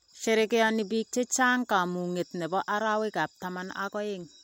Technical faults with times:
none

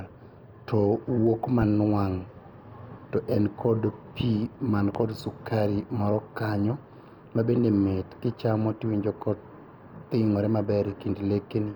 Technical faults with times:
1.62-1.65 loud pop
4.95-4.98 loud pop

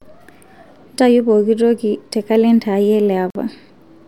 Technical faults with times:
3.30-3.35 Bluetooth stall

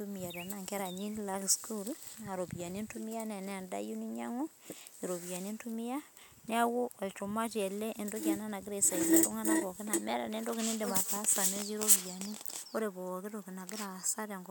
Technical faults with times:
none

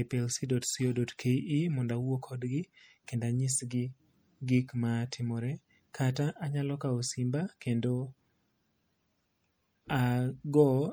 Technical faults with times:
0.00-10.92 MP3 compression

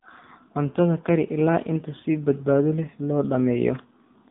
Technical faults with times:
0.00-4.30 AMR narrowband mobile codec

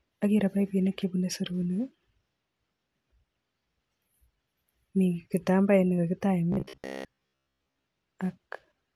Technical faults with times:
6.52-7.90 robotic sound from repeated short buffers

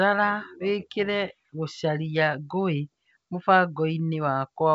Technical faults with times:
none

